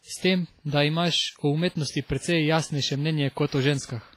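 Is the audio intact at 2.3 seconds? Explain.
No. At 2.3 seconds, as throughout the clip, the speech sounds washy and ringing, with hiss swelling and fading with the signal and nothing above 15.5 kHz. The likely cause is heavy WMA compression, consistent with roughly 24 kbps, where coarse quantisation smears noise across long transform blocks.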